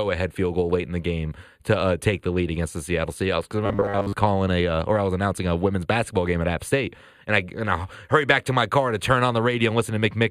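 Speech runs through the whole clip with channel delay causing comb filtering. One channel is late by roughly 0.1 ms, about four samples, and when the two are summed to mono they cancel at evenly spaced frequencies, the first near 5 kHz. The upper range sounds hollow and dulled. Because the notches stay fixed rather than sweeping, this is a static time offset, not a flanger or a wandering phase problem. From 3.66 to 4.13 s the sound turns into a rigid, metallic robotic buzz at 100 Hz that only loosely tracks the speech. This is likely robotic sound from repeated short buffers: the same 10 ms or so of audio replays while most of the real audio in that span is skipped. Unlike a plain dropout or stutter, there is no silence or audible looping of syllables, only a steady pitch imposed by the repeat rate.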